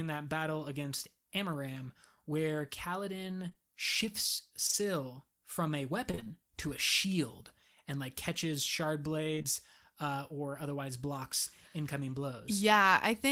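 Around 3.49 to 3.57 s and again at 4.67 to 4.75 s there's short concealed packet loss: back-to-back 20 ms packets missed the decoder, and the receiver stretched the last bit of speech over each hole, so you get a quick smear or wobble. From 6.11 to 6.38 s it turns into repeated packet loss (robotic sound). Five gaps land in that quarter-second, the longest about 27 ms, and roughly half the stretch is patched audio, so it goes choppy. The same short concealed loss returns from 9.35 to 9.46 s, three packets in a row right after "and like catches shard" and just before "uh or otherwise blocks", giving another brief wobble.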